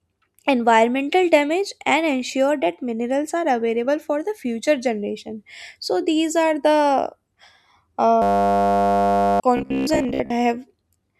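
At 8.22 s a system hang loop takes over until 9.4 s. The computer froze while the sound hardware kept replaying one 10 ms slice of its buffer over a hundred times, producing a steady 100 Hz buzz and losing about a second of speech. The waveform shows one identical cycle repeating, and the spectrogram shows flat horizontal lines at 100 Hz and its harmonics.

From 9.57 to 10.30 s the speech turns into robotic sound from repeated short buffers. It likely comes from audio arriving too seldom, so roughly half of it is filled by replaying short chunks. That stamps a rigid, metallic 66.8 Hz buzz onto the voice, visible as evenly spaced vertical striations about 15 ms apart.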